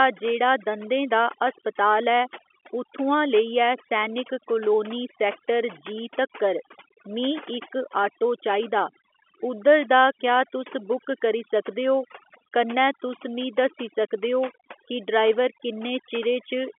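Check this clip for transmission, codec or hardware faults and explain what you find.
Overdone noise removal runs through the whole speech clip. A noise reducer set far too strong has pulled individual frequency bands down to nothing wherever they came near its noise estimate, and the quieter parts of the voice went with them. Pauses drop to near silence flecked with twinkling specks. On a spectrogram the background is black with scattered flickering dots, and the speech harmonics look ragged and patchy at their edges. On the waveform the gaps between phrases are almost flat. The narrow telephone band, with nothing above about 3.7 kHz, belongs to the line itself and is not part of this fault.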